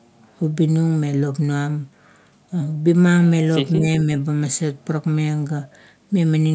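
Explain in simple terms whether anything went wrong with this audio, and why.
At 3.78 to 3.85 s the speech briefly dips, noticeably quieter for about 70 ms. This is speech suppressed in double talk, likely from an echo canceller turning everything down.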